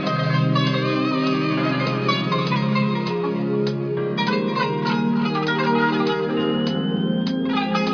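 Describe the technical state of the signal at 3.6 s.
At 3.6 s the signal runs cleanly, with no dropout, distortion, glitch or other audible fault at that moment.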